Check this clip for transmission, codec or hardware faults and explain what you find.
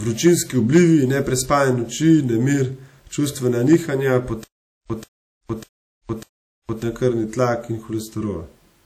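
Yes, there are three kinds of fault in this speech clip: codec damage throughout, two spots of clipping and a stuttering dropout.

WMA compression runs through the whole clip, and the damage is plainly audible. There's a ringing, washy quality with hiss that swells and fades with the speech, which is what you get when quantisation noise from long transform blocks smears across tens of milliseconds and quieter spectral detail is zeroed out. The cause is likely an early WMA encoder at a low rate, something around 48 kbps.

Hard clipping turns up twice, at 0.75 to 0.82 s and again at 3.73 s, just after "noči nemir čustvena". Both times the signal was driven about 3 dB past what a stage in the chain could pass, so the waveform peaks were sliced flat. Those flat tops add harmonics high up the spectrum, and you hear them as a brief crackle on the loudest moments.

Stutter with silent gaps starts at 4.44 s, right after "noči nemir čustvena nihanja", and lasts until 6.83 s. 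A short burst of about 0.14 s plays, then about 0.46 s of dead silence follows, and the pair repeats every 0.6 s or so, four times. That's the signature of a player or stream that likely stalled, replayed its last fragment on each retry and then ran dry. The audio that belonged in that stretch is gone.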